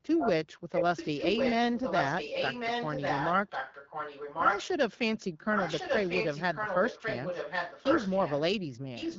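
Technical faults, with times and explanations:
0.18–0.31 s, 0.73–4.68 s, 5.54–8.5 s, 8.95–9.19 s: echo leak. Speech repeats about 1.1 s late, about 5 dB quieter than the original and as loud as it from 0.73 to 4.68 s, likely from a far-end loudspeaker whose echo canceller missed it. Spectrograms show harmonic patterns duplicated 1.1 s later.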